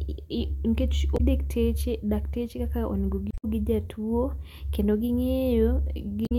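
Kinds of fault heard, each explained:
Damaged data in a compressed stream: corrupted frames make the decoder lose sync, causing three short glitches.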